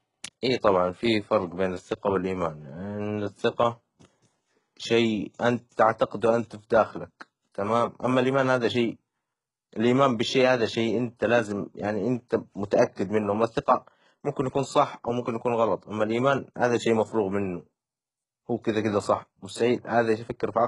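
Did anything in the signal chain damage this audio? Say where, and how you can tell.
Yes, in the codec stage. Sibilants are gritty and metallic, with nothing above 11.1 kHz. This is likely HE-AAC compression near 12 kbps: the treble is synthesised, not simply dulled as by a low-pass filter.

Pre-echo, also from the codec: a hiss at 0.41 s before "إي طبعًا في فرج" and at 12.96 s before "منه أما الثقة ممكن". The noise leads each attack, unlike reverb, which trails.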